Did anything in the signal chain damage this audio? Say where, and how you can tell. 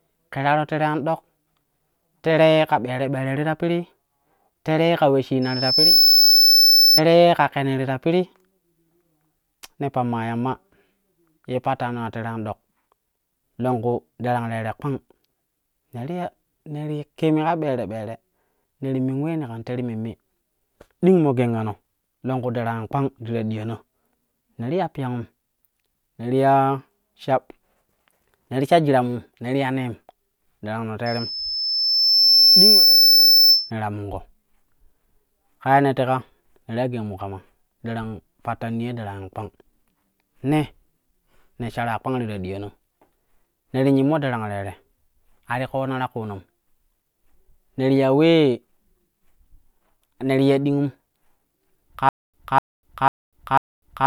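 Yes. A 5.3 kHz tone swells to about 10 dB above the speech at 5.42–7.01 s and 31.06–33.71 s. This loudspeaker feedback squeal comes from an acoustic loop where the microphone-speaker gain exceeds one.

From 52.09 s to the end, one 0.25 s fragment repeats four times with 0.25 s silences between. This stutter with silent gaps likely comes from playback stalling and retrying.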